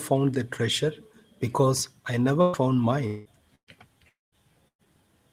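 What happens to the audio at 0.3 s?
Nothing goes wrong at 0.3 s; the speech passes through that moment intact, with no dropout, click, distortion or other fault.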